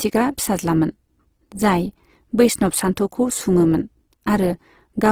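Throughout the speech clip the sound is rough and grainy, with noisy texture replacing clean harmonics, though content still reaches 20.3 kHz. The likely cause is Opus compression in CELT mode filling starved bands with noise or folded energy, consistent with roughly 16 kbps.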